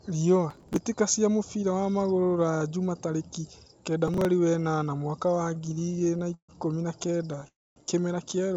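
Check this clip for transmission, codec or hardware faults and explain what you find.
The speech has three kinds of fault, carried over a call path whose G.722 coding leaves nothing above 8 kHz.

Processor overload crackle at 0.51–0.82 s and 4.08–4.25 s: audio buffers were skipped as processing deadlines slipped, which fits a buffer of about 3 ms. The result is gritty tearing crackle.

Repeated stalls (stutter) at 5.35–6.51 s and 7.03–7.44 s: the jitter buffer kept running dry and the receiver stretched the last sound, with pauses up to 143 ms. Nothing is lost, but delivery drags and stutters.

Call audio freeze at 7.48–7.78 s: the jitter buffer emptied, likely from packets held up in transit. A brief fading buzz drops into silence for about 0.25 s, then the speech resumes where it stopped.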